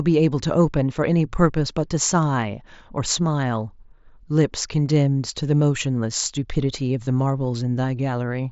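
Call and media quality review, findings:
Short buzzy tick in the speech at 7.05 s, about 15 ms long. Probable component: headset radio link. Mechanism: concealed Bluetooth headset packet loss. The receiver bridged the gap by repeating the best-matching stretch of the immediately preceding waveform. The length fits two consecutive lost mSBC frames. The speech is band-limited to 8 kHz with light graininess on louder syllables, consistent with the mSBC headset codec.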